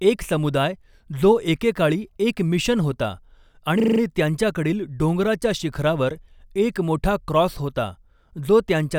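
From 3.8 to 4.0 s the speech gives way to a system hang loop: a 40 ms slice of audio repeats five times at 25 Hz, a rapid stutter as the hardware recycles its buffer. The waveform shows identical blocks; the spectrogram shows evenly spaced vertical striping.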